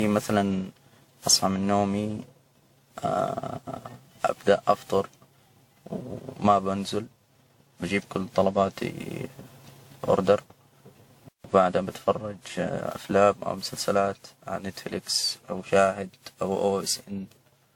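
Generation loss runs through the whole recording, from the first second to the last. The speech sounds swirly and hollow, with a smeared top end and softened consonant attacks, more degraded than a single lossy encode would leave it. The likely cause is repeated decoding and re-encoding, around ten passes, in a chain that fits WMA at 96 kbit/s. Each pass requantised on a shifted frame grid, so noise and spectral gaps built up.

A playback stall follows from 11.29 s to 11.44 s. The audio cuts to silence mid-flow for about 156 ms, then carries on where it left off, with "بتفرج أفلام أو مسلسلات" coming right after the gap. The likely cause is a player that briefly ran out of buffered data or had its audio thread blocked, so output halted until it caught up and resumed from the same point.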